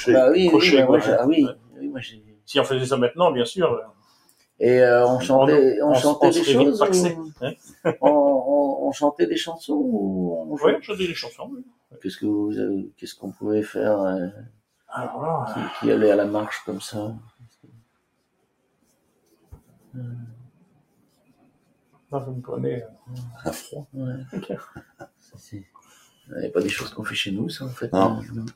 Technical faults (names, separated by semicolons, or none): noise suppressor applied to music or sounds; sound cut by the noise suppressor; loud pop